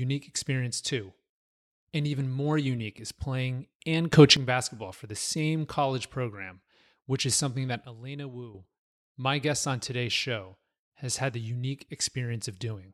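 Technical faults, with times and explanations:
4.13–4.37 s and 7.85–8.55 s, sudden gain jump: the digital gain was likely stepped between adjacent samples with no ramp, so the speech and its background noise lurch together, about 13 dB louder in the first span and about 11 dB quieter in the second.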